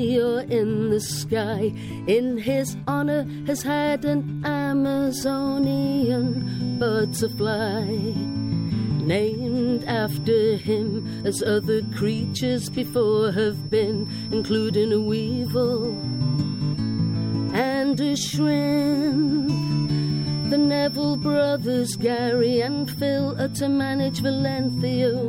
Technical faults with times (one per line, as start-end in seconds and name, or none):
5.08-25.28 feedback whistle